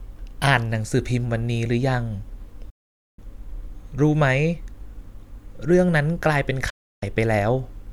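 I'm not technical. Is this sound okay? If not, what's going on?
No. The speech has two gaps caused by a digital broadcast dropout. The first runs from 2.70 to 3.19 seconds, about half a second. The second runs from 6.70 to 7.03 seconds, about a third of a second. Each time, the receiver stopped getting usable data and went quiet. The sound fades out very quickly, stays silent, then comes back. Whatever was said during those gaps is simply missing.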